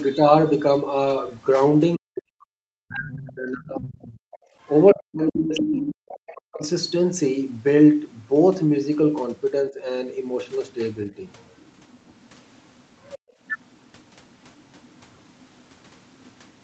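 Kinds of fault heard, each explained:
Speech suppressed in double talk: With both sides talking at once, the echo canceller likely could not separate the local talker from the loudspeaker echo and turned both down. From 1.97 to 6.62 s the speech drops by roughly 40 dB, then dips mildly near 10 s.
Other side's voice leaking through: The echo canceller likely left part of the loudspeaker's far-end voice in the microphone signal. A second voice comes through about 10 dB below the talker from 3.08 to 6.68 s, then very faintly from 10.48 s to the end.
Background gated by the echo canceller: While the loudspeaker was playing, the canceller clamped the microphone down hard. The room sound drops out for about 0.2 s twice, by about 21 dB at 4.38 s and by about 34 dB at 13.19 s, then returns.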